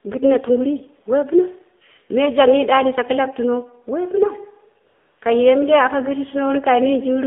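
Throughout the clip, the speech has passed through the AMR narrowband mobile codec at a low bitrate, with plainly audible coding damage that fits roughly the 7.4 kbps mode. The codec rebuilds the voice from a vocal-tract model excited by sparse pulses, and the line passes only 250 Hz to 3.7 kHz. The result is thin, muffled speech with no low body and no air, and a clearly buzzy, synthetic edge.

From 4.88 to 5.18 s there is AMR comfort noise. The phone treated the talker as silent and stopped sending speech frames for 300 ms, so the receiver filled the gap with generated noise built from a rough level and spectrum estimate. The real background drops out and is replaced by a smooth, even hiss that switches in and then out.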